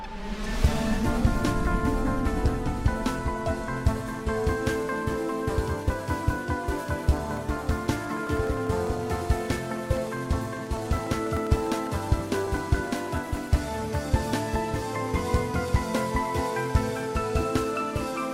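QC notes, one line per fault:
7.07–13.47 s, periodic USB or driver dropouts: steady ticking every 0.1 s, ten a second, which is something stalling the USB bus or audio driver on a fixed cycle. Each stall drops a couple of milliseconds of audio to silence, so the clicks only show up where there's signal.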